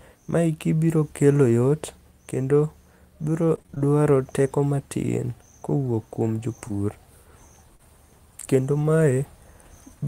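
From 3.55 to 3.86 s the speech turns choppy, with a robotic, stuttering edge just before "teko matin kowuok kuom". This is repeated packet loss. Over that third of a second the stream kept losing chunks, the longest hole about 24 ms. Each one was patched by stretching the preceding sound, and close to half the stretch ended up synthetic rather than real, which produces that mechanical texture.

Just after "teko matin kowuok kuom", at 6.68 to 6.72 s, there is a brief smear, a tiny wobble where a sliver of sound seems to blur. A second, slightly longer one follows at 7.76 to 7.81 s. Both are short concealed packet loss. Around 20 ms and then 40 ms of audio failed to arrive in time. The decoder bridged each hole by extending the last sound and then blended back into the real signal.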